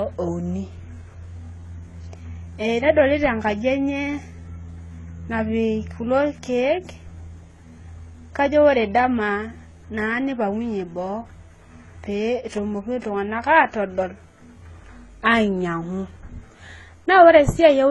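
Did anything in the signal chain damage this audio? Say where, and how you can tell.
Yes, at the codec stage, throughout the speech: transcoding between lossy codecs, likely HE-AAC at 16 kbit/s re-encoded as AAC-LC at 32 kbit/s. Nothing survives above 11.5 kHz, and two kinds of artefact overlap, because the second encoder spent bits preserving the first one's damage.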